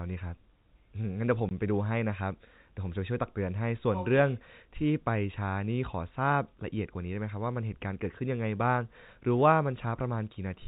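At 1.49 s the speech drops out briefly. This is packet loss filled with silence. About 20 ms of audio went missing, which fits two 10 ms packets, and the receiver played silence instead. The hole has hard edges. The G.711 telephone band stays audible around it.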